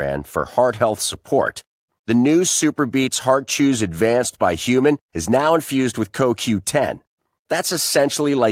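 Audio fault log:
No faults heard.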